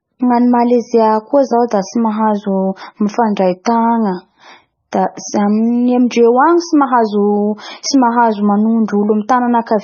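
Throughout, the speech likely went through transcoding between lossy codecs, a low-bitrate MP3-like stage then AAC, leaving nothing above 6.6 kHz and layered, smeared artefacts.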